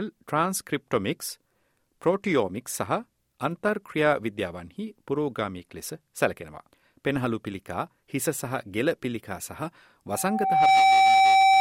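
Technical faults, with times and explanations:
10.11 to 11.6 s, loudspeaker feedback squeal: a steady 771 Hz tone swells over roughly 0.7 s to about 10 dB above the program and rings to the end, because the microphone hears its own loudspeaker and loop gain exceeds unity at that frequency.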